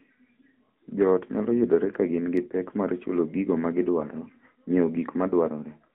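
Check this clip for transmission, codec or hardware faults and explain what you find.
One fault runs through the whole clip: the speech has passed through an AMR narrowband mobile codec. From start to end the audio is confined to a telephone band of roughly 200 Hz to 3.5 kHz. The codec damage is plainly audible, a buzzy, synthetic edge on the voice that fits AMR-NB's 10.2 kbps mode. The codec samples at 8 kHz and rebuilds each 20 ms frame from a vocal-tract filter driven by a few sparse pulses, so fine detail is lost. On a spectrogram, energy stops abruptly near 3.5 kHz with a bare region above and little below 200 Hz. Harmonics look smeared and blocky frame to frame.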